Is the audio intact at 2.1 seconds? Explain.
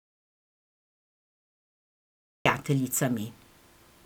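No. At 2.1 seconds the clip is in an audio dropout to silence that is already under way when the recording begins and lasts until about 2.46 s. The span is silent, with no room tone or noise floor. The speech then starts abruptly once the signal returns. This most likely comes from the input being lost, through a disconnected device, a failed link or a mute, while the recorder kept writing silence.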